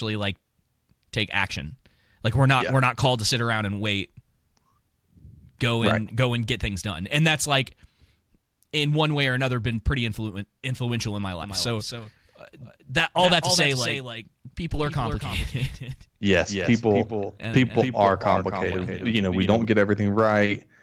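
At 2.99 to 3.05 s, between "not yeah we're not" and "to sit around and", and again at 9.71 to 9.73 s after "one way or another", lost packets were rebuilt from error correction. The decoder filled each gap with a low-bitrate copy carried in the following packet, so there is no dropout, only a brief rough, noisy patch.

From 11.43 s, after "influential in my", until 19.65 s, a doubled audio track follows the speech about 300 ms behind and about 10 dB quieter. It likely comes from a second, slower capture path. Unlike room echo, it has no decay and starts and stops abruptly.

Within that stretch, more packets were rebuilt from error correction: 60 ms at 11.95 s, 60 ms at 13.19 s and 100 ms at 14.69 to 14.87 s, each a short grainy, noisy patch with no gap.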